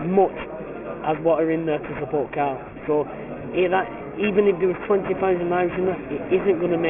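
Aliasing runs the whole way through: the rate was dropped, which fits a 6 kHz rate, without filtering, so everything above 3 kHz folds back as gritty, metallic junk roughly 15 dB down.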